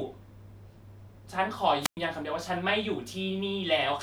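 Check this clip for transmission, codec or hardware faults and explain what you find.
One fault is present in this speech clip, a wireless microphone squelch dropout, running from 1.80 to 1.97 s. The analogue FM link weakens, so hiss and static swell briefly as the signal fades. Then the receiver's squelch cuts the output entirely for about 109 ms, leaving a hole of near silence before the speech comes back. That rising static ahead of the gap distinguishes it from a digital packet loss, which drops out abruptly with no noise build-up.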